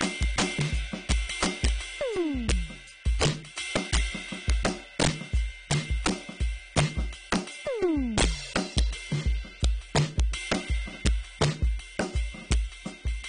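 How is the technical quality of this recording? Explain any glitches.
The technical quality is poor: this music has two problems running through the whole clip.

The first is integer overflow. The signal is pushed roughly 10 dB past the ceiling, so every peak that goes over wraps to the opposite sign instead of being held at the limit. It only hits a small share of samples, but those loud moments come out as violent cracks, much harsher than clipping.

The second is the muffled, smeared tone. Nothing comes through above about 9.8 kHz, and the coding damage is plainly audible as a warbly, fizzy texture. That is likely AAC compression at a low bitrate, something around 32 kbps, with the encoder cutting the top end and thinning the bands.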